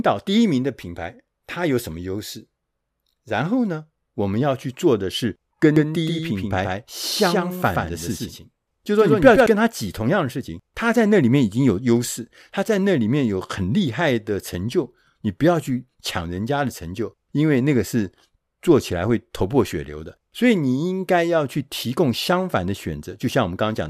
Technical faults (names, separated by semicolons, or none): doubled audio track